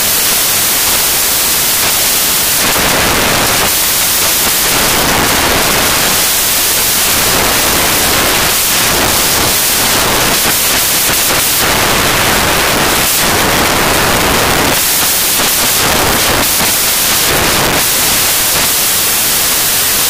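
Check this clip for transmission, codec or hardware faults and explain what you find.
The whole clip, from start to end, is dominated by one fault: samples built from the wrong bytes. The reader assembles each sample from misordered or misaligned bytes, so the rapidly fluctuating low-order bits land in the most significant positions. The result is loud, harsh broadband noise, close to white on the louder passages.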